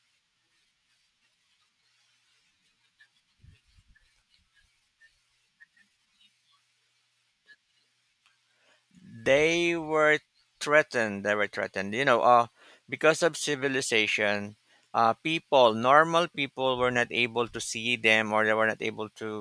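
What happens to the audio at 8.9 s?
At 8.9 s the speech plays through cleanly, with no dropout, click, distortion or other fault at that point.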